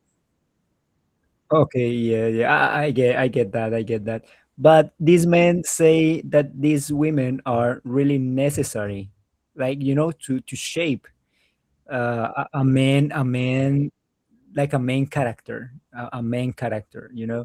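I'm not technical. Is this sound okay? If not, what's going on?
Yes, no faults here.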